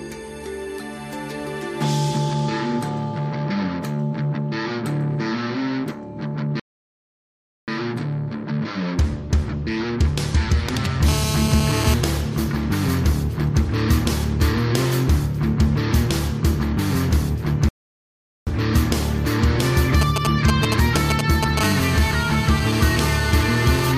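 At 6.60 s the sound drops to silence and picks up again at 7.68 s exactly where it left off, adding about 1.08 s. This is a rebuffering stall: the player ran out of downloaded audio and waited for more. Unlike a dropout, nothing is skipped. The same thing happens from 17.69 to 18.47 s, adding about 0.78 s.

From 11.08 to 11.94 s a hard, raspy GSM phone buzz sits about 6 dB below the signal. A nearby 2G phone in a call is transmitting bursts 217 times a second, and the audio circuitry rectifies them. The result is a steady 217 Hz tone dense with harmonics that bears no relation to the program.

Straight after it, from 12.03 to 14.20 s, the phone's user falls silent in the call and the buzz turns into GSM signalling bursts. These come as even ticks with a longer 217 Hz buzz twice a second, well below the signal, rather than a continuous drone. That broken rhythm is what separates them from the steady call buzz.

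From 20.01 to 21.59 s the phone is signalling on its own, and the bursts now reach roughly the level of the sound itself. At 21.61 s this gives way to a continuous call buzz, about 9 dB below the signal, which runs to 23.92 s.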